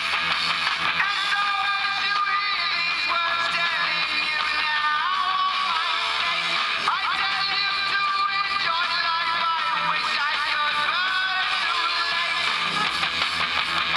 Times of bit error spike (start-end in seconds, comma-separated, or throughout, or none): 1.77